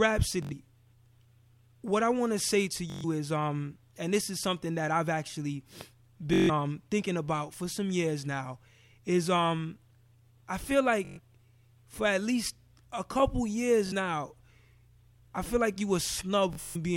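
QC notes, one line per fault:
0.43–0.53, 2.90–3.04, 6.34–6.50, 11.05–11.20, 13.87–13.93, 16.53–16.76 s: Bluetooth stutter. Late or dropped packets make the receiver loop its last short slice, so the speech buzzes, then jumps ahead. The last one comes in broken bursts.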